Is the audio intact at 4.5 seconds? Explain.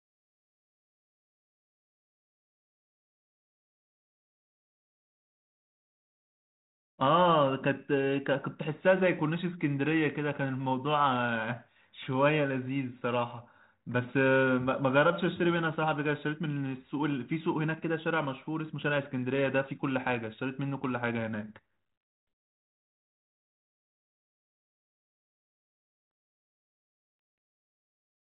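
Yes, the audio is intact at 4.5 seconds, with the speech coming through the 32 kbit/s G.726 ADPCM path without a fault at that moment.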